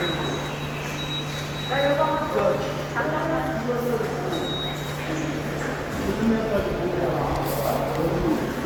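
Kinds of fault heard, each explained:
Generation loss: the sound is swirly, hollow and smeared throughout, with blurred attacks, though content still reaches 20.1 kHz. The likely cause is repeated lossy re-encoding, around seven passes, consistent with an Opus chain near 64 kbit/s. Each pass stacks fresh quantisation noise and spectral holes.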